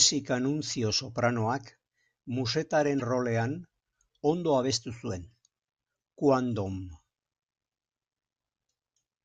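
A speech clip with damaged data in the compressed stream: corrupted bytes near 2.97 to 3.02 s break the decoder's frame sync, producing a brief glitch.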